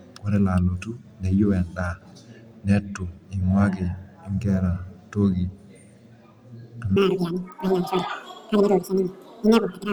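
Speech that, from 6.96 s to the end, has audio read two samples at a time (double speed): each frame takes a sample pair, so the sound plays twice as fast, a full octave higher, unlike a clean pitch shift.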